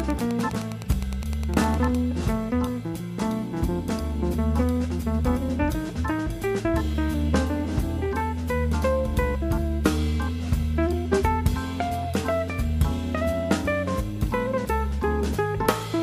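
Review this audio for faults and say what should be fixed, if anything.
A steady ticking runs under the sound from 0.0 to 2.0 s, about ten clicks a second and roughly 20 dB below it. This is Wi-Fi interference: a nearby radio's beacon, repeating every 102.4 ms, is being rectified by the audio circuit. To prevent it, keep Wi-Fi devices away from the audio equipment and use shielded, balanced cabling.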